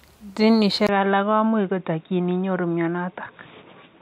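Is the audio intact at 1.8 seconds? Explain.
No. The recording's input was likely switched to a poorer device at 0.87 s, after a 20 ms gap. From there to the end, the speech loses everything above 3.8 kHz and sounds dull and boxy, with faint new background noise and no change in level.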